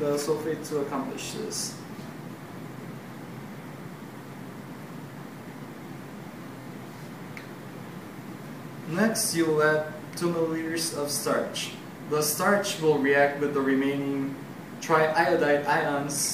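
At 1.25 s and 6.62 s, a repeated buffer: a roughly 23 ms chunk, which fits a 1024-sample buffer, plays three times with hard joins, giving a brief stutter.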